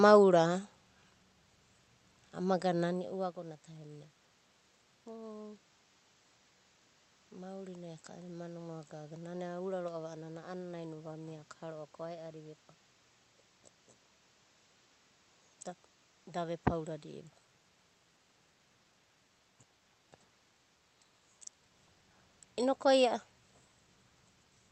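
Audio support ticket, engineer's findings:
No system faults found.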